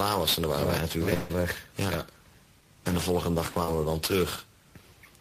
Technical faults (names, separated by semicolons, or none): long network dropout; short concealed packet loss